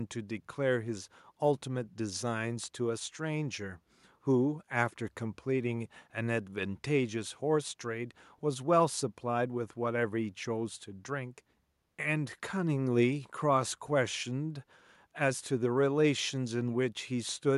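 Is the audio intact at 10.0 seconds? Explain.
Yes, at 10.0 seconds the speech plays through intact, with no audible fault at that moment.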